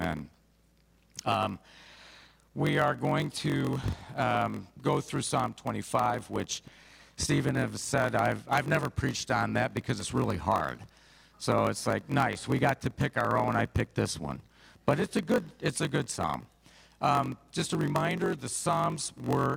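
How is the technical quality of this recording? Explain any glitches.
The recording has a steady technical fault that runs from start to finish.

Block size mismatch (padded), throughout: each block written is shorter than the block read, so a short run of zeros fills every block. This produces a 46.9 Hz buzz, which fits a 1024-sample read block, and the audio plays at 0.938 times normal speed with roughly unchanged pitch.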